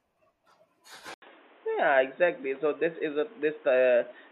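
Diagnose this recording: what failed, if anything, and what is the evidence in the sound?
At 1.14 s the speech drops out for about 80 ms, then returns dull and boxy, with nothing above 3.8 kHz and a new, faint background noise, while loudness stays the same. At the driver stage, the input likely switched to a poorer device with a narrower band.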